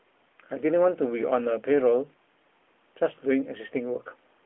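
No technical faults can be heard in this recording.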